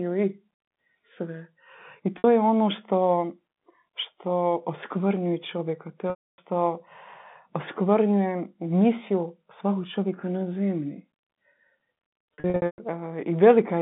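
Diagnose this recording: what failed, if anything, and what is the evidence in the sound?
The network stage is at fault here: packet loss with pitch repetition. At 2.18 s there's a brief 60 ms held, buzzy note where the receiver loops the last pitch period. At 6.10 s a 280 ms gap repeats, fades and drops to silence before the speech cross-fades back in. From 12.34 to 12.78 s the losses are scattered, the longest run about 120 ms, which fits 20 ms packets going missing. The band-limited G.711 telephone sound carries through underneath.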